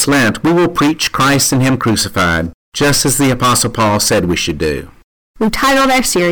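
Hard clipping runs through the whole speech clip. The signal is driven about 21 dB beyond what the stage can pass, so close to a third of the samples hit the ceiling and are cut flat. This produces a harsh fuzz on every loud sound.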